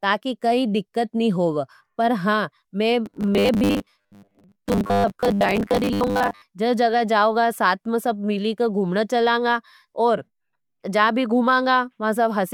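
From 3.06 s to 6.42 s, right after "होवे पर हां मैं", the speech takes on a robotic sound from repeated short buffers: a rigid, metallic buzz at 100 Hz that still loosely tracks the syllables. The likely cause is audio arriving too slowly, with a roughly 10 ms fragment looped to fill the gaps, so most of that stretch is repeats rather than fresh sound. Unlike plain dropouts there is no silence, and unlike codec warble the pitch stays fixed.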